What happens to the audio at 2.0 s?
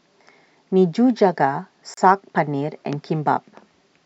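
A gap at a join of encoded pieces falls just before that point, from 1.94 to 1.97 s. The speech was encoded in separate pieces and joined without trimming, so the encoder's leading delay and the padding on the last frame both stay in. The result is a silence of about 33 ms cutting into the continuous speech, with its edges smeared by the codec, before the speech resumes where it left off.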